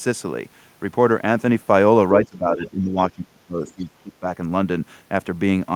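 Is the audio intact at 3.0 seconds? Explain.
No. At 3.0 seconds two faults overlap. The first is speech suppressed in double talk, running from 2.23 to 4.26 s. With both ends talking at once, the echo canceller likely could not tell the local talker apart from the loudspeaker echo and pulled the whole signal down. The speech dips by as much as about 20 dB, with affected stretches that add up to roughly a second and a half within that span.

Inside that stretch, from 2.97 to 3.02 s, the other side's voice is leaking through. The far-end voice played on the device's loudspeaker was likely not fully cancelled from the microphone, so a brief scrap of it gets into the signal. It is faint, roughly 25 dB below the speech, and sounds like a short fragment of a second voice underneath the suppressed talker.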